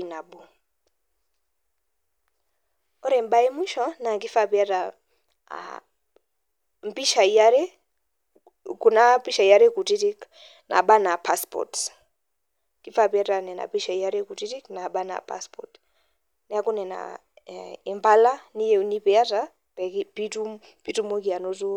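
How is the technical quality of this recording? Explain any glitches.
Nothing in the recording sounds technically wrong; no glitches heard.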